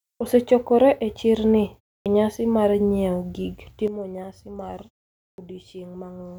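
At 2.02 s, after a 0.3 s pause, a clipped start after a pause cuts about 38 ms from the next onset. The device was still waking, so the waveform jumps straight from flat silence into speech with its first sounds missing.

At 3.88 s a sudden gain jump drops speech and background together by about 11 dB until the end. The waveform envelope steps down abruptly, most likely from a gain change applied without a ramp.

At 5.34 s, after a 0.52 s pause, the same clipped start returns and removes about 41 ms. The spectrogram shows a hard vertical edge where the onset should build up.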